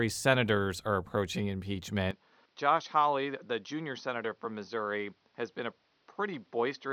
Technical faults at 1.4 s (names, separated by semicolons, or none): none